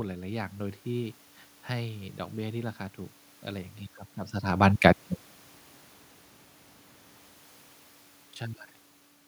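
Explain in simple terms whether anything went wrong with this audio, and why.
Nothing went wrong; the system handled this speech properly.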